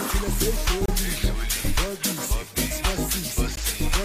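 At 0.86 to 0.88 s and again at 3.56 s, a gap at a join of encoded pieces breaks otherwise continuous sound, about 28 ms and 16 ms long. Separately encoded pieces were joined with each encoder's start delay and final-frame padding left in. Unlike a dropout, nothing is lost: the sound resumes exactly where it stopped, and the codec softens the gap's edges, so the shorter one may register as a deep dip.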